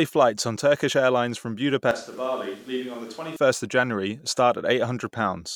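From 1.91 to 3.36 s the speech abruptly turns roomy and hollow, loses bass, drops roughly 10 dB and sits over room noise about 25 dB below it, likely a switch to a distant microphone. Unlike a simple gain dip, the room's character changes.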